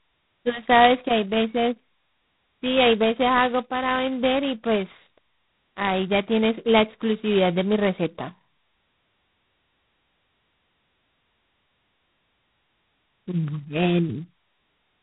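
Speech runs throughout with heavy G.726 ADPCM damage. A harsh, rasping hiss tracks its level, which fits 16 kbit/s coding. Nothing passes above 3.9 kHz.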